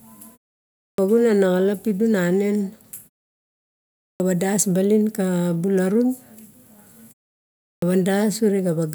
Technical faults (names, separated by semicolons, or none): clipped start after a pause